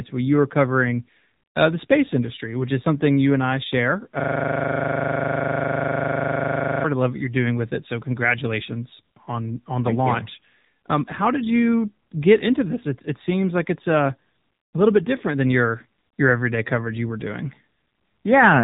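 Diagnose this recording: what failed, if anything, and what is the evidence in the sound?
Codec stage: AMR narrowband mobile codec damage throughout. The spectrogram stops flat at 4 kHz. Sparse pulse excitation makes the speech buzzy and synthetic, which fits a 7.4 kbps mode.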